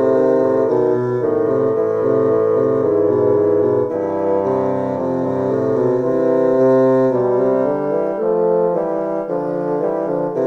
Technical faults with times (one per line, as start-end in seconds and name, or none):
none